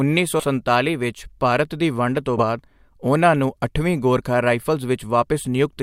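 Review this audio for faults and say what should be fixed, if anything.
The speech has two spots where compressed frames are skipped, around 0.39 to 0.44 s and 2.37 to 2.44 s. At each one the audio jumps ahead, by roughly 70 ms at the first and about 40 ms at the second, which fits losing a few 20 ms frames and then a couple. To prevent it, check the file's integrity and make sure damaged or missing frames aren't getting through transfer or storage.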